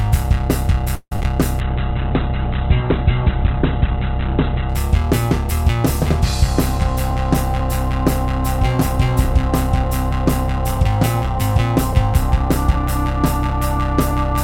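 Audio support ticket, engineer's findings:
Repeated packet loss (robotic sound), 0.95–1.25 s. Four packet gaps in quick succession, mostly patched by extending the previous audio. The longest gap is 159 ms. The sound turns choppy, with short pieces missing.

Call bitrate drop, 1.61–4.76 s. The bandwidth estimate collapsed and the encoder was pushed to a very low rate, consistent with about 11 kbps, for roughly 3.1 s. Coarse coding and a 4 kHz cutoff leave the sound rough and muffled.

Jitter buffer speed-up, 8.61–12.74 s. An overfull jitter buffer trimmed short pitch-period segments repeatedly, about 50 ms in total. Playback runs about 1% fast at unchanged pitch.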